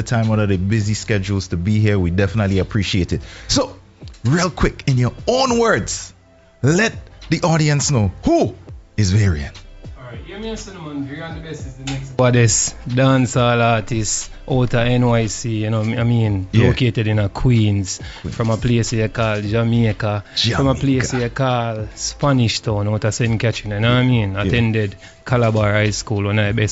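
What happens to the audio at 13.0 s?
Nothing goes wrong at 13.0 s: the audio runs straight through that point with no dropout, click, distortion or other fault.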